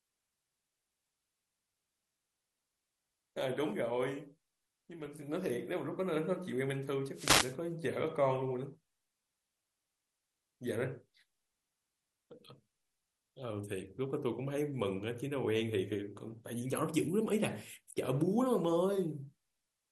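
A speech recording with MP2 compression damage throughout: the sound is dull, with a granular, gurgling texture as upper sub-bands drop in and out and the remaining bands are coarsely quantised. This is likely an MP2 encode at a low rate, around 80 kbps. From 5.00 to 5.06 s there is a short burst of DAB burbling, brief blips of noise in single sub-bands. Its length points to about three corrupted frames, consistent with a small residual bit error rate of a fraction of a percent slipping past error correction. From 7.14 to 7.56 s a wireless microphone noise hit produces a swish of static over the speech, the kind of rise in receiver noise caused when an FM radio link fades through multipath cancellation.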